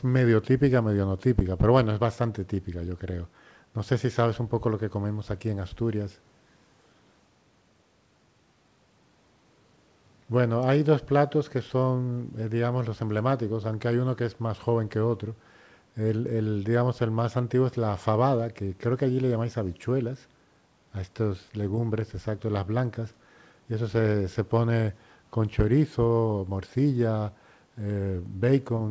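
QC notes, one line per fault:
No faults heard anywhere in the clip.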